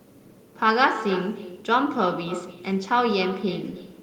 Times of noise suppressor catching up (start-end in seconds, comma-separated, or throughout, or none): none